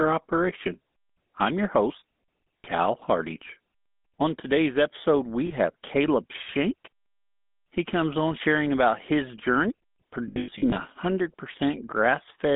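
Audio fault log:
throughout, GSM full-rate codec: pulse-excited vocal-tract coding, consistent with a 13 kbps full-rate stream, makes the speech buzzy and gravelly and confines it to 200 Hz–3.6 kHz.
2.61–2.66 s, 5.46–5.52 s, 10.28–10.79 s, lost GSM frames: missing frames are covered by repeating the last good frame at falling level, so speech briefly freezes into a rough metallic ring. The last stretch has scattered losses totalling 280 ms, with runs up to about a tenth of a second.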